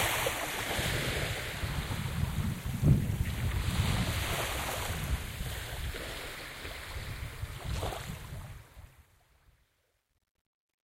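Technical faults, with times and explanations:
8.14–10.93 s, truncation distortion on a fade: the fade-out, starting around 8 s, is computed without dither at a word length that fits about 11 bits, so the dying waveform collapses into coarse square steps. From 8.98 s to the end the tail turns gritty.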